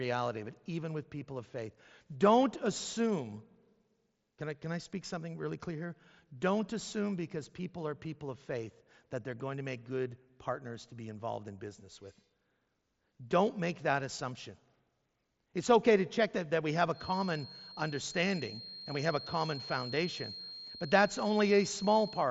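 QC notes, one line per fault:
16.90–22.31 s, feedback whistle: a thin, steady tone near 4.2 kHz sits about 15 dB under the speech until the end, swelling and fading slowly in level, likely from a speaker-to-microphone loop held just at the point of feedback. On a spectrogram it appears as one unbroken horizontal line, well inside the headset band that stops near 7.7 kHz.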